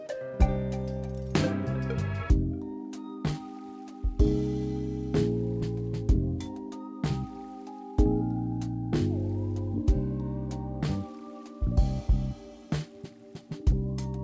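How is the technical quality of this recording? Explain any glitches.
Good quality: no glitches or faults can be heard.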